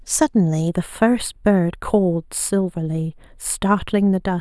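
From 0.68 s to the end, one channel runs a couple of samples late before the mono sum, giving channel delay (comb filtering): a notch near 7 kHz dulls the speech's top end.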